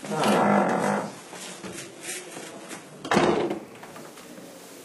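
From 0 to 3.35 s, an adaptive stream starting at a low bitrate dulls the audio, with nothing above 11.8 kHz. At 3.35 s it jumps abruptly to higher quality without a gap.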